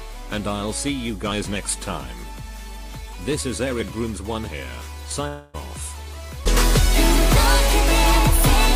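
From 5.27 to 5.56 s the sound turns into a fading buzz or hiss, then resumes with 260 ms missing, likely a long network dropout.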